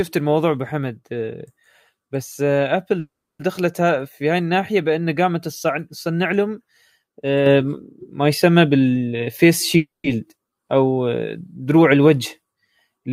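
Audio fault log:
2.99–3.41 s and 9.77–10.06 s: call audio freeze. Delayed packets likely left the jitter buffer empty, so the receiver stretched the last sound into a fading fill before going quiet. The first gap lasts about 400 ms, roughly 300 ms of it silent. The second lasts about 270 ms, around 170 ms of it silent. Nothing is lost: the sound resumes exactly where it broke off, but each stall adds its length to the delay.
7.46 s to the end: sudden gain jump. The digital gain likely stepped up by about 5 dB from one sample to the next, with no ramp to smooth it. The sound and its background noise jump louder together at that instant and stay at the higher level for the rest of the clip.
9.07–9.76 s: jitter buffer speed-up. Just before the second freeze, the receiver held more audio than its target and trimmed about 150 ms by cutting out many short pitch-period pieces in quick succession. 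The sound plays at about 123% speed while its pitch stays unchanged, so this stretch comes across as hurried rather than higher.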